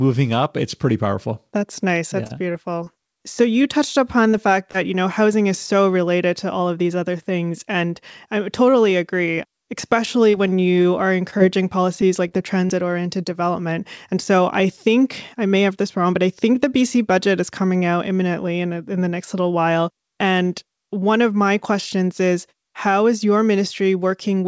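From 2.24 to 4.76 s, just before "you know housing is", and again from 8.90 to 12.71 s, leading into "oriented development", the speech carries scattered short gaps: about seven and then about ten tiny losses, none longer than roughly 30 ms. Each was patched by stretching the preceding sound, so they come through as brief ticks and smears rather than the silent holes of a true dropout.

Between 14.15 and 15.72 s, after "oriented development" and before "this wrong but I", a jitter buffer speed-up trims about 50 ms in small pitch-period pieces, pushing delivery to 103% speed. The talker's pitch stays put, which separates this from a resampling shift. Across the whole clip, the G.722 call path at 64 kbps caps the audio at 8 kHz.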